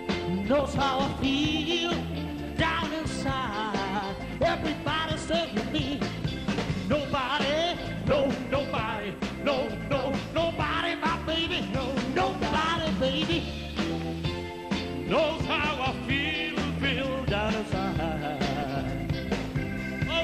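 From the start the whole clip sounds dull and gurgly, with the top end flickering in and out. That's likely MP2 compression, starved of bits at a rate that fits roughly 80 kbps. On top of that, DAB burbling shows up from 0.59 to 1.23 s, 5.52 to 5.93 s and 7.85 to 8.48 s. Bit errors, at roughly 0.5 percent, slip past the error correction and put short blips of noise into single sub-bands.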